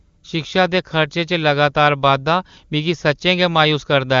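Nothing goes wrong here: the speech comes through the AMR wideband (HD Voice) codec with its usual ceiling at 7.2 kHz, and the coding sounds consistent with its top 23.85 kbit/s mode.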